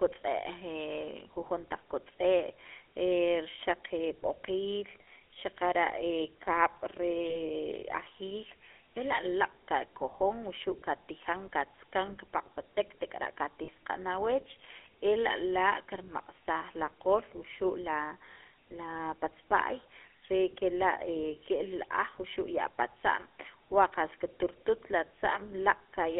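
GSM full-rate codec damage runs through the whole speech clip: the sound is squeezed into a telephone band of roughly 300 Hz to 3.4 kHz and carries the plainly audible buzzy, gravelly grain of the original GSM coder, consistent with its 13 kbps full-rate mode. That codec rebuilds the voice from a vocal-tract filter fed by a sparse, regularly spaced pulse train, so fine detail is replaced by a coarse, rasping texture. Lost GSM frames cause brief dropouts at 7.30 to 7.40 s, 12.06 to 12.10 s, 13.64 to 13.68 s and 18.32 to 18.37 s. The 20 ms gap fits one missing frame, and the 40 ms gaps fit two. At each point the decoder reuses the last good frame's settings, so instead of a clean gap the voice briefly turns into a short, rough, metallic ring.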